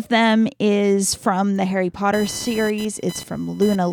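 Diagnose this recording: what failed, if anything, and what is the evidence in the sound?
The fault is computer activity noise in the analogue wiring stage. From 2.13 s to the end of the clip, a buzzy, chirping pattern rides under the speech. It pulses at around 1 kHz and sits roughly 20 dB below the speech, and it does not follow the speech's level or rhythm. The computer's changing load, from the processor, graphics card or mouse, draws current through a ground shared with the audio circuit, so that activity reaches the recording as interference.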